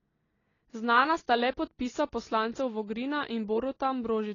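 From start to finish the speech sounds dull and smeared, with nothing above 7 kHz and an audible warbling, fizzy texture on sustained sounds and sibilants. The likely cause is heavy AAC compression, at a bitrate low enough to suggest about 24 kbps.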